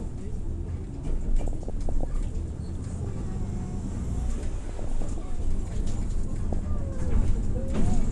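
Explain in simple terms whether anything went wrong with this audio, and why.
Yes, two things went wrong. Throughout, these everyday sounds are dull and plainly gurgly, with a grainy roughness, which likely comes from MP2 compression: the top of the sound is dropped and what remains is stored coarsely. It is steady, unlike the bursts below.

DAB burbling breaks in from 1.23 to 2.11 s, 2.91 to 3.05 s, 4.65 to 5.18 s and 6.53 to 6.76 s, as short noisy blips. Weak radio reception let errors into the audio data, so short blips of noise appear in narrow bands. Unlike the constant dullness, it comes and goes.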